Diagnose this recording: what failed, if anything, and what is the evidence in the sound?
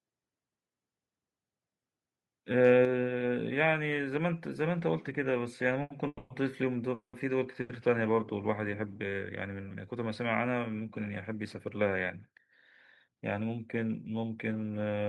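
At 2.85 s the whole signal, speech and background together, drops by about 4 dB in a single step and stays there. This points to call processing: the software likely judged the microphone too hot and stepped down the device's input volume.

Two short stalls from late packets, at 5.82–5.91 s and 7.61–7.70 s, each hold the current sound for about 80 ms with a slight buzz or dip before the audio resumes where it left off. This is a network fault: a packet arrived late, the jitter buffer ran dry, and the receiver stretched the last sound until the packet arrived.

Two call audio freezes follow. At 6.07–6.31 s the sound is held as a fading buzz or hiss for about 230 ms, ending in roughly 30 ms of silence. At 6.94–7.14 s it is held for about 190 ms, with around 110 ms of silence. In both, the audio then continues from where it stopped, with little or nothing lost. The likely cause is packets held up in the network long enough to empty the jitter buffer.

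From 13.08 to 13.58 s the speech runs about 9% fast at unchanged pitch and sounds hurried. This is a jitter buffer speed-up. After the earlier delays the buffer was over its target, so the receiver cut out a series of pitch-period slices, around 50 ms in total, to shed latency. The Opus call path, with its top end near 12 kHz, is consistent with a moderate bitrate of around 32 kbps.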